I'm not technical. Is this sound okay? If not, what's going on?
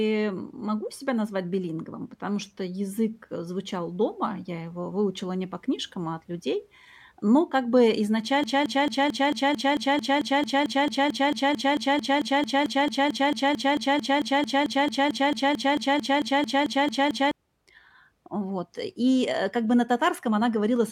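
No. From 8.44 s to 17.31 s the speech turns into a broken-record loop: the same 0.22-second scrap repeats back to back about 40 times. The playback or stream likely stalled and kept resending its last piece, so the speech from that stretch is lost.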